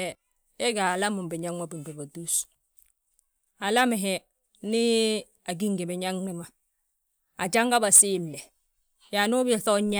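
No technical faults detected.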